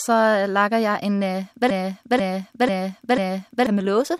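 At 1.70 s, right after "laget jeg en", the speech locks into a broken-record loop. A fragment of about 0.49 s plays four times back to back, identical each time, until 3.67 s. The audio that belonged in those two seconds never arrives. The likely cause is a stalled player or stream that kept resending the last fragment it held. Unlike a stutter or a dropout, the loop is long and exact, with no gaps and no partial jumps.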